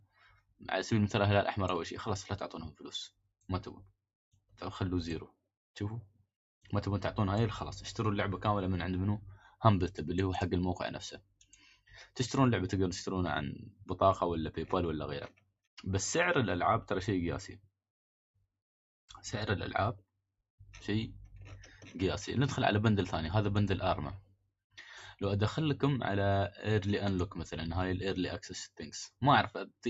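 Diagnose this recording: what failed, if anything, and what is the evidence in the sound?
The failure is in the call processing stage: a noise suppressor built for speech was applied to music or sounds across the whole recording. It treats sustained and ambient material as noise, so the level swings by around 5 dB as the gain moves, and held sound pumps and thins while attacks pass. On a waveform the envelope breathes between transients. On a spectrogram, decays and tails fade early below the 8 kHz ceiling of the call path.

In seven places the suppressor cut the sound itself hard: 0.0 to 0.61 s, 3.1 to 3.47 s, 9.33 to 9.63 s, 11.17 to 12.16 s, 13.71 to 13.88 s, 15.29 to 15.53 s, and 24.21 to 24.51 s. The drops reach about 15 to 19 dB, and the longest lasts roughly 0.7 s. A waveform shows sudden notches in the envelope. A spectrogram shows the affected sound dimming, then recovering.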